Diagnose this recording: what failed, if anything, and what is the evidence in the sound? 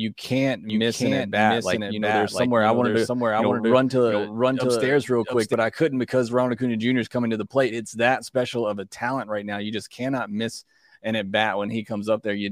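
Doubled audio track, 0.70 to 5.54 s: a dry copy about 5 dB quieter trails by roughly 0.7 s, likely a second, slower capture path mixed in.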